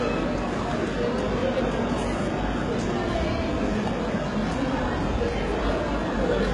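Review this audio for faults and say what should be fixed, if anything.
HE-AAC compression damage runs through the whole clip. Nothing sounds above 11.3 kHz. The upper band is rebuilt from copied lower bands. Its harmonics do not line up, so the top sounds gritty and metallic. The heavy damage fits a bitrate near 12 kbps, likely from HE-AAC encoding. Encode at a much higher bitrate, or keep a lossless master.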